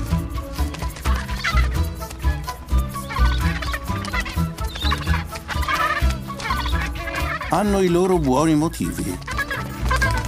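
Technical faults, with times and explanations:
No technical faults are audible; the signal runs continuously, with no disturbance to its level or timing at any point.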